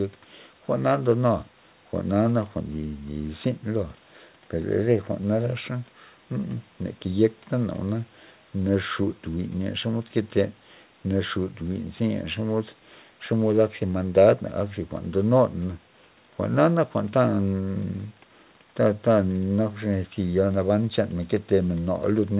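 No technical faults are audible.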